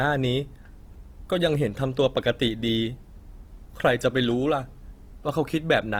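Throughout the speech the sound has a grainy, rough texture, with tonal parts sounding noisy, while the top end still reaches about 20.2 kHz. This is likely Opus compression in its music mode: the encoder keeps each band's energy but, short of bits, fills detail by copying lower bands or with noise. The plainly audible damage at full bandwidth points to a rate around 24 kbps.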